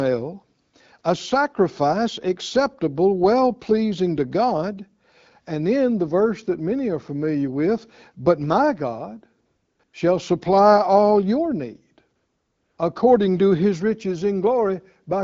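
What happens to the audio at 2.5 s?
Nothing goes wrong at 2.5 s: the speech there comes through intact, carried by the AMR wideband (HD Voice) codec at 12.65 kbit/s with only the light coding character that rate leaves.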